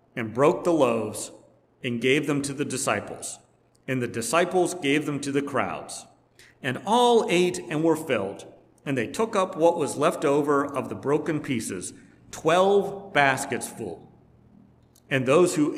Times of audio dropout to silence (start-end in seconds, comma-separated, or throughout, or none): none